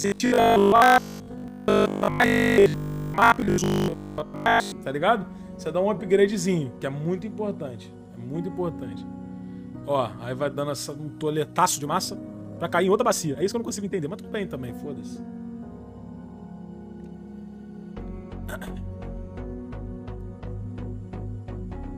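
From 0.02 to 4.72 s the sound turns into a rigid, metallic robotic buzz at 50 Hz, most likely from repeated short buffers of about 20 ms; a spectrogram shows evenly spaced vertical striations. Between 11.45 and 14.25 s a time-stretched section runs 1.58 times faster at unchanged pitch, rushed, with the waveform's envelopes visibly compressed, likely from tempo-fitting software.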